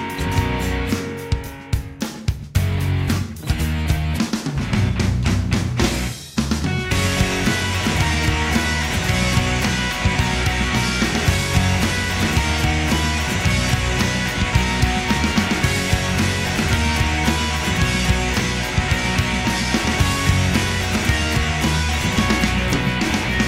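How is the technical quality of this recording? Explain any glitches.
The recording carries a continuous clock slip clicks fault from 0.11 s to 23.46 s. Several hundred single-sample slips arrive at roughly 50 ms intervals, about twenty per second, which blurs into a soft rattle rather than separate ticks. The likely cause is two unsynchronised clocks disagreeing by roughly 500 ppm, so a sample is dropped or repeated each time the drift totals one sample. The rattle is most audible on loud, sustained material and disappears in silence.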